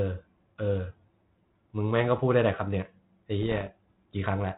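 From 3.42 to 3.67 s, bits on the ADPCM link were corrupted at a low rate, well under one percent. These are bit errors on an ADPCM link, carried here over G.726 at 32 kbit/s, which otherwise adds only light coding damage. Each flipped bit throws off the decoder's step size and prediction, so the error keeps ringing for a few milliseconds. For about a quarter of a second the speech is broken by pops and rough, gritty bursts, with the level briefly jumping and dipping.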